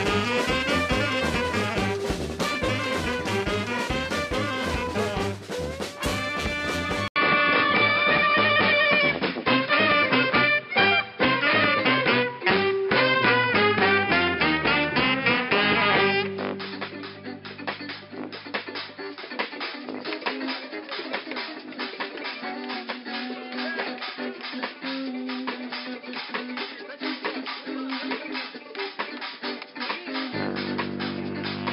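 At 7.08 s there's an 80 ms gap, then the sound goes dull, nothing above 5.2 kHz, with a shifted level and faint new hiss: likely an input switched to a poorer device.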